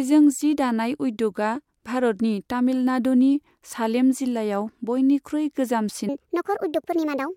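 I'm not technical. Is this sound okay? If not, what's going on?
No. From about 6.09 s to the end at 7.36 s there's a section at the wrong speed: the speech suddenly runs about 1.46 times too fast, so it sounds hurried and roughly seven semitones higher. That's likely from being played back against the wrong clock.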